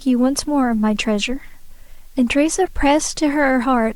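From the very start there's a constant, even hiss under the speech. That's low bit depth with dither: the audio was cut down to 9 bits, and dither was added before rounding so the error comes out as steady white noise, not crunchy distortion. It sits roughly 35 dB below the signal, so you hear it most in the gaps between phrases, where nothing covers it up.

Then at 2.65 to 2.68 s there's a short glitch, about 24 ms long. That's a corrupt frame decoded. It sounds like a single compressed frame got its bits scrambled, and the decoder played it anyway. Misread gains or codes dump energy at the wrong frequencies for just that frame's length. The error peaks somewhere around 20 dB below full scale.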